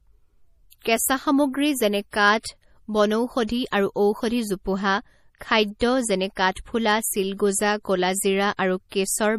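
Right from the start the whole clip has that watery, swirly texture, with nothing above 15 kHz, likely from heavy MP3 compression at a bitrate around 40 kbps. The encoder is starving for bits, so it drops the top end and flickers weak frequency lines on and off. The first pre-echo lands at about 0.82 to 0.85 s, a short hiss about 29 ms long just ahead of a sharp attack. The same thing happens at 5.79 s, shorter this time, and again from 8.89 to 8.92 s. Each time the codec's noise, sized for the loud onset, spills into the quiet moment before it, so the attack sounds softened and smeared.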